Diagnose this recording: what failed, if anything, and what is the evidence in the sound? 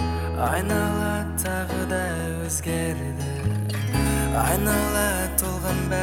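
From 3.70 to 5.87 s the top end jumps up: the sound turns thin, bright and hissy-sibilant, with 10 kHz sitting about 8 dB hotter relative to 1 kHz than elsewhere in the clip. That's pre-emphasis left on, most likely at playback. The treble boost applied before storage never got its matching de-emphasis cut on the way out. The shape of the tilt fits the CD 50/15 µs curve.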